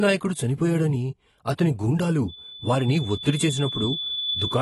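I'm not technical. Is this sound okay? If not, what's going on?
No. Throughout, the speech sounds dull, with nothing above 12 kHz and plainly audible damage. That points to AAC compression as the likely cause, squeezing the file hard.

From 2.28 s to the end, a loudspeaker feedback squeal appears: a 3.5 kHz tone swells over roughly two seconds until it is about as loud as the speech.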